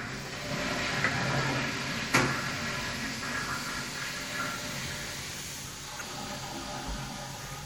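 Right from the start the whole clip has a watery, swirly quality, with the top end shaved off and chirpy flicker in the busier high detail. That's likely MP3 compression, and the damage is plainly audible, which fits a low bitrate around 64 kbps.

Then at 5.97 to 6.02 s there's a short glitch, which is damaged data in a compressed stream: bad bytes threw the decoder off its frames for about 40 ms until it found its footing at the next frame header.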